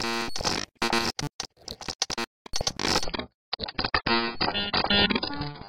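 At 3.04 s the adaptive stream drops to a lower bitrate and stays there to the end. The sound turns dull and smeared, which points to a fall from about 96 to 12 kbit/s. On a spectrogram, everything above 5.2 kHz abruptly vanishes, with no gap.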